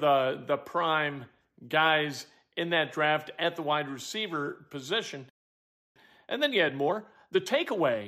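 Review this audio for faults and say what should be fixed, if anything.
At 5.29 s the speech cuts to silence mid-flow and stays silent until 5.96 s, a gap of about 0.66 s. This is a playback stall, likely caused by the player running short of buffered data or having its output thread blocked, so nothing reached the output.

From 5.96 s to 8.06 s the speech sounds hurried, running at 1.25 times normal speed while keeping its normal pitch. This is time-compressed catch-up: the player cuts out small pieces and cross-fades across the joins to clear the backlog left by the stall.

To prevent both, keep a deeper playback buffer and keep the audio thread free of blocking work, so the player neither starves nor has to catch up.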